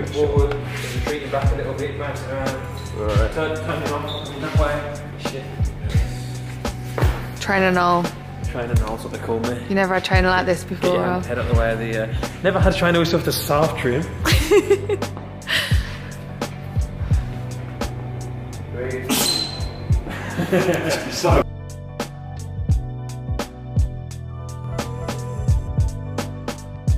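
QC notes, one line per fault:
24.64–26.97 s, doubled audio track: from 24.64 s to the end, a second full-band copy of the sound runs roughly 300 ms behind the original, at about the same level. Each event arrives twice, the repeat clean, with no decay or room colour, and it cuts in abruptly rather than building up. This is likely a second capture of the same signal through a slower path, or an edit that leaves two copies out of step.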